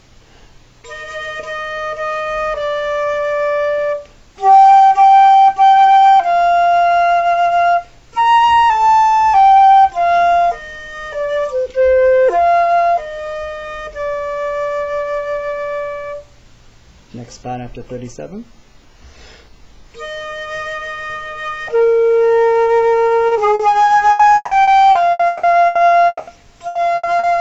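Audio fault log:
23.27 s and 23.55 s, short concealed packet loss: twice, about 40 ms of the stream arrived too late to play, and the receiver carried the preceding sound forward across each hole before blending back into the real signal. Each one is heard as a small smear or wobble where a brief piece of sound is gone. A spectrogram shows the harmonics or noise texture held flat for those few hundredths of a second, with a soft seam where the real signal returns.
24.11 to 26.30 s, repeated packet loss (robotic sound): eight losses in this stretch, the longest about 200 ms, so roughly 840 ms of the 2.2 s span is filled in rather than received, a little over a third of it. Each patch repeats the last sound and the next gap follows soon after, which gives a choppy, robotic quality with parts missing. On a spectrogram the span looks like a striped patchwork, with repeated frozen slices between short stretches of normal detail.
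26.67 and 26.95 s, burst of packet loss: two gaps of about 80 ms each, roughly 280 ms apart at the onsets, where consecutive packets were lost. The receiver extended the last sound and turned it down as each gap went on, so a voiced sound turns into a brief held buzz and other sounds into a fading hiss, before the audio resumes further along with that part missing. The waveform shows a decaying, overly regular stretch, and the spectrogram shows smeared, fading bands.
27.19 s, short concealed packet loss: a further 40 ms hole just before the end of the clip, filled by continuing the last sound and then blending back into the real signal. It is heard as another brief smear or wobble. It looks the same as the two earlier ones, a thin frozen slice on the spectrogram with a soft join at the point where the real signal takes over again.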